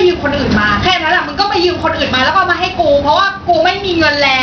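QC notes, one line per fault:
Throughout: gain pumping. The level swings by roughly 15 dB. That points to gain set too high ahead of a fast limiter or compressor, likely the cause, which squashes loud and soft parts together.
Throughout: Bluetooth SBC compression. The upper treble flickers and drops in and out, and a gritty, aliased noise rides on the speech. That damage is heavy and is likely from SBC at a low bit pool, which fits around 64 kbps, where the weaker high sub-bands get few or no bits and the rest are coarsely quantised.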